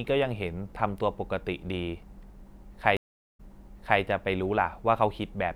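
At 2.97 s the connection breaks and the player reconnects with a fresh decoder mid-stream. This stream reconnect leaves 420 ms of silence, after which the speech resumes 0.63 s earlier than where it stopped, repeating a short stretch before settling by 4.01 s.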